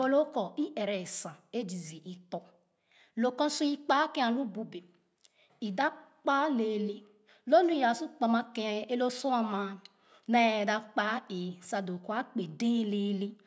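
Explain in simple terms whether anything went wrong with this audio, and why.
Nothing went wrong here; the speech comes through intact, with no dropouts, glitches or interruptions anywhere in the recording.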